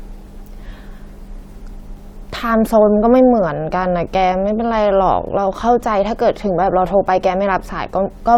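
No faults detected anywhere in the speech recording.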